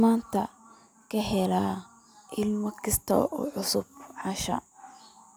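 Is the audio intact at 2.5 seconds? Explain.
Yes, at 2.5 seconds the speech plays through intact, with no dropout, click, distortion or other technical fault at that moment.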